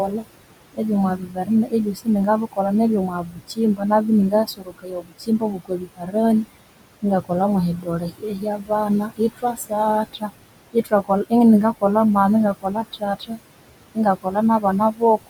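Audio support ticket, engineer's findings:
Noise suppressor artifacts, throughout clip. Room noise sits about 14 dB under speech; suppressor pulls it down by about 21 dB in gaps, lets it back under speech. Frame-by-frame band gating leaves the residual pumping.

Speech cut by the noise suppressor at 0.08–6.45 s (drop about 21 dB, roughly two seconds total), 7.02–11.83 s (about 20 dB, about a second), 12.54–13.39 s and 13.95–15.28 s (about 20 and 21 dB, brief). Suppressor misreads soft consonants and word tails as noise, swallowing them.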